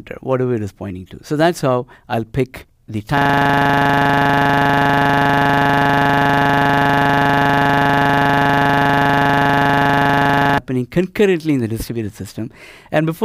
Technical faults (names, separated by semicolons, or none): system hang loop